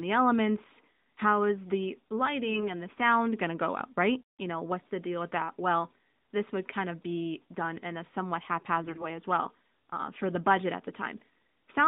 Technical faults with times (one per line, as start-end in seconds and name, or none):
2.51-2.70 AMR bit errors
8.82-9.05 AMR bit errors